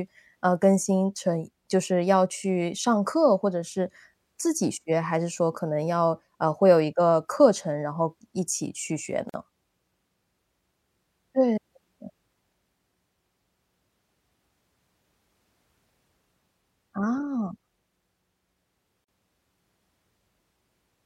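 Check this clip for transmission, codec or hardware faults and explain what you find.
Two gaps at a join of encoded pieces interrupt the speech, at 9.29 to 9.34 s (about 45 ms) and 19.04 to 19.08 s (about 41 ms). Each piece was encoded separately and joined untrimmed, so encoder start delay and final-frame padding leave silence. The speech stops abruptly and resumes where it left off. The waveform drops to near silence, and the spectrogram shows a blank vertical band with smeared edges.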